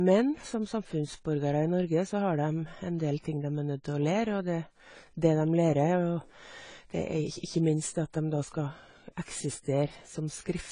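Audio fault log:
Throughout, AAC compression: the speech sounds dull and smeared, with a watery, fizzy texture on sibilants and held vowels, and nothing above 10 kHz. This is likely AAC-LC coding at a low bitrate, which fits roughly 24 kbps. The encoder drops the top band and quantises the remaining spectrum coarsely. On a spectrogram there is a hard ceiling at 10 kHz, with patchy holes and blurred texture below it. The waveform envelope looks largely intact.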